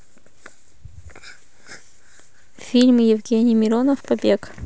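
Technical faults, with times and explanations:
Nothing technical goes wrong anywhere in this speech recording, so there's nothing to list.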